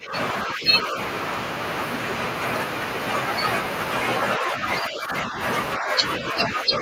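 The speech dips in level five times, at 0.00 to 0.14 s, 0.44 to 0.97 s, 4.38 to 4.63 s, 4.82 to 5.40 s and 5.77 to 6.81 s. The deepest dips are roughly 15 dB at the start, a small 5 dB or so near 4.4 s, and around 10 dB elsewhere. This is likely speech suppressed in double talk. An echo canceller mistook the talker for loudspeaker echo and turned the voice down.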